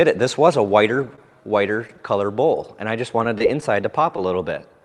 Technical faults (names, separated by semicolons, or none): short concealed packet loss; scattered short gaps